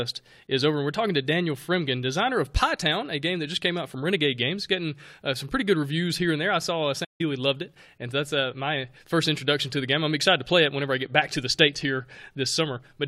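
A playback stall at 7.04 to 7.21 s cuts the speech off just after "there I saw uh", leaving about 0.15 s of dead silence before it picks up again with "loved it and that's". The gap lands mid-phrase with no fade, so it reads as a hiccup rather than a pause. The likely cause is the player running dry of buffered data, or its output thread being held up, so nothing reached the output until it recovered and carried on.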